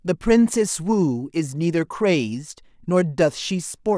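No technical faults can be heard anywhere in the speech.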